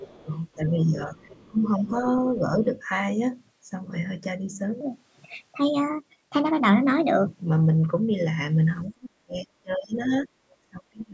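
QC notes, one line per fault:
0.0–0.72 s, 1.2–1.89 s and 10.5–10.55 s, other side's voice leaking through: a second voice sits about 20 dB under the talker, with a final brief scrap near 35 dB down. This is likely loudspeaker playback the echo canceller failed to remove.
0.55–1.94 s, 8.91–10.27 s and 10.71–11.13 s, speech suppressed in double talk: the talker drops by up to about 15, 35 and 30 dB while both sides overlap. This is likely because the canceller could not separate the talker from the echo and turned both down.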